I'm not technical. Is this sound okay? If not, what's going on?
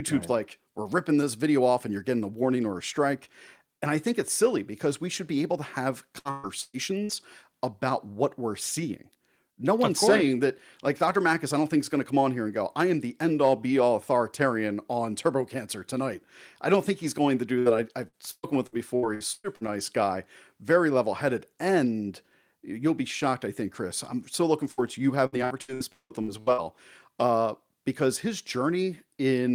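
No, there are dropouts in this speech recording. From 6.19 to 7.12 s, 18.08 to 19.71 s (ending just before "guy very level headed") and 25.26 to 26.61 s (ending before "uh because his"), the voice turns choppy and robotic, with pieces chopped out. This is repeated packet loss. Chunks of the audio stream went missing again and again, four times in the first stretch and eight in each of the others. Each time, the player patched the hole by stretching out the last bit of sound.

There are also two single short breaks, at 17.59 s (right after "he's going to do") and at 24.72 s. At each, a brief moment of sound is held over and fades before the speech jumps ahead, skipping about 60 ms. This is a burst of packet loss, a single cluster of data that arrived too late or not at all.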